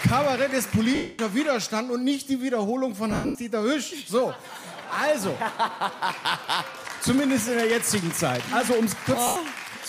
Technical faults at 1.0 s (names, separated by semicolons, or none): lost LE Audio frames